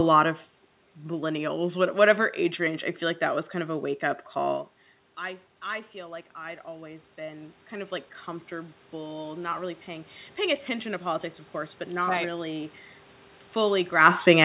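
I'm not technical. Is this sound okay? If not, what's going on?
No. From about 5.2 to 10.2 seconds, the voice and the background noise slowly swell louder together. That is automatic gain rising: the talker moved away just before, so the call's volume control heard quieter sound and gradually turned itself up.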